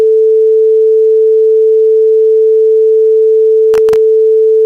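From 3.74 to 3.96 s the sound breaks into a short burst of processor overload crackle. The processing could not finish its very small audio buffers on time, and several deadlines in a row were missed. Each miss drops a tiny slice of about 0.7 ms to silence with hard edges, which fits a buffer of under a millisecond. Together these gaps produce a gritty tearing over the sound that stops once the load clears.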